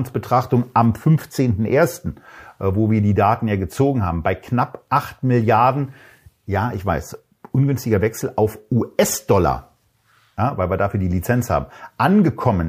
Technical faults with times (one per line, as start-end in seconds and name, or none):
none